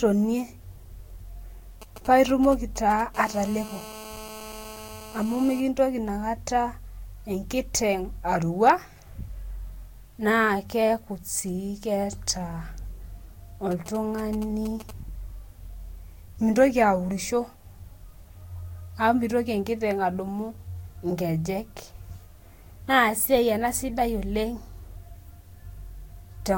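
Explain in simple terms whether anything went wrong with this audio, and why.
A mobile phone using the old 2G network sat close to the recording equipment, and the wiring picked up its radio pulses as sound. While the phone checked in with the network, this produced GSM signalling bursts: galloping dit-dit-dit ticks and short 217 Hz buzzes from 1.8 to 3.0 s and again from 13.7 to 14.9 s.

Then, from 3.1 to 5.6 s, the phone was transmitting steadily as if on a call. This produced GSM phone buzz, a hard, raspy drone pulsing 217 times a second. It sits under the speech but bears no relation to what is being said.

The speech also sounds swirly, smeared and hollow all the way through, and nothing is left above about 16.6 kHz. This is likely generation loss: the audio was squeezed with a lossy Vorbis codec about three times over, and each pass added fresh damage.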